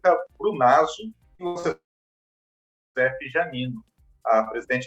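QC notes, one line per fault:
1.35–1.42 s, short concealed packet loss: About 40 ms of audio failed to reach the decoder in time. The receiver bridged the gap by extending the preceding sound for about 35 ms, then cross-faded back into real audio. This leaves a brief smear or wobble where the original detail was replaced by a continuation of what came before.
1.47–1.58 s, burst of packet loss: Several consecutive packets, about 80 ms of audio, were lost or arrived too late to play. The receiver filled the gap for roughly 83 ms by repeating the last sound and lowering its level as the gap continued. This produces a held buzz or fading hiss in place of real content. Playback then resumes later in the stream, and the 80 ms in between is simply gone.
1.59–1.66 s, short concealed packet loss: A second short loss of about 40 ms follows almost immediately after the burst. It was concealed with about 41 ms of extrapolated sound before blending back into real audio. 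This gives another short smear.
1.71–2.98 s, long network dropout: Audio stops arriving for about 1.24 s. The concealment continues the last sound only briefly before fading it out, and roughly 1.15 s of near-silence follows. Audio then returns partway through the content, with the missing span absent rather than delayed. The cause is likely a network interruption, and it comes right after the cluster of shorter losses.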